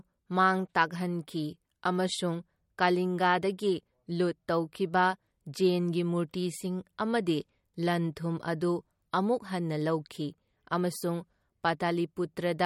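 Likely MP3 compression, at a bitrate that fits about 48 kbps, runs short of bits throughout: nothing remains above 17.2 kHz, and the speech sounds plainly watery and swirly.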